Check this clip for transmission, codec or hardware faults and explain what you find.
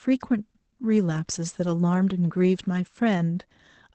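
One codec fault runs through the whole clip.

Opus voice compression, throughout: the speech has passed through Opus's SILK linear-prediction coder in wideband mode, which models the voice with a prediction filter and codes the leftover excitation coarsely. Nothing remains above 8.7 kHz, so sibilants lose their air and the voice sounds muffled. The coarse excitation adds a plainly audible hoarse, slightly robotic grain, which points to a low bitrate of around 12 kbps.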